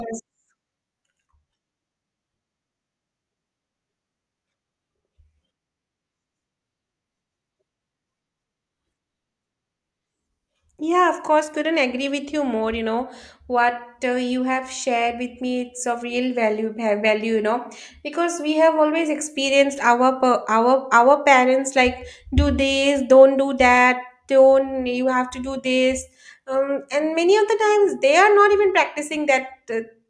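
No technical faults can be heard anywhere in the recording.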